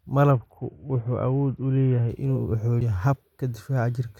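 A Bluetooth SBC bit pool drop runs from 0.31 to 2.09 s: the encoder starved the upper sub-bands, dulling the treble and adding gritty noise, which fits a bit pool falling from 31 to 7, near 61 kbps. A CD skip at 2.81 s gives a very brief mute as the laser jumps to another turn of the spiral, resuming the speech from a different point.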